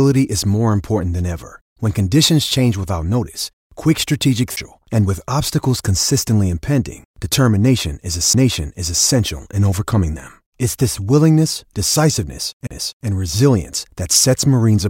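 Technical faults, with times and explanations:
4.56 s, 8.33 s and 12.67 to 12.71 s, CD skip: each time the laser jumped to a different turn of the disc's spiral. The player muted briefly (about 10 ms, about 7 ms, then about 40 ms), giving a tick or short gap before speech resumes from another point.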